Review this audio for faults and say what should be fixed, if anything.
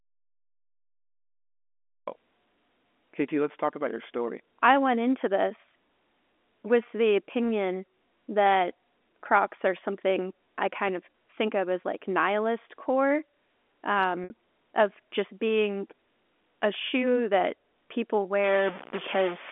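The opening is dead silence with no room tone, already under way when the clip starts and lasting until 2.07 s, when the speech cuts in mid-flow. This audio dropout to silence is likely a lost input, such as a disconnected device or a stray mute, while the recorder kept writing silence. To prevent it, secure the input connection and confirm the signal is live before recording starts.

Two brief glitches interrupt the speech. From 11.12 to 11.14 s a 20 ms stretch sounds slightly held and buzzy. From 14.24 to 14.30 s a 60 ms gap, which fits about three lost packets, buzzes and then fades toward silence before the speech cross-fades back. This is packet loss with pitch repetition: the receiver replays the last pitch period to fill the missing audio. To prevent it, stabilise the network path or add jitter buffering and forward error correction.

From 18.44 s to the end at 19.51 s, the sound picks up distortion, and noise fills the quieter moments. 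A stuck bit is the likely cause: a broken data line or converter holds one bit fixed, which throws about half the sample values off. To prevent it, inspect and replace the faulty cable, interface or converter. The G.711 telephone line band, roughly 250 Hz to 3.5 kHz, is heard as intended throughout.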